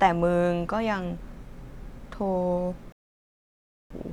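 At 2.92 s the speech cuts to silence, a digital broadcast dropout: the receiver muted on bad frames until 3.95 s, losing about a second.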